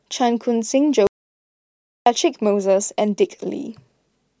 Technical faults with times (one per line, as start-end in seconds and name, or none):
1.07-2.06 audio dropout to silence